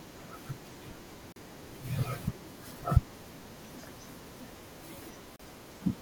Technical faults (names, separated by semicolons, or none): gap between stream segments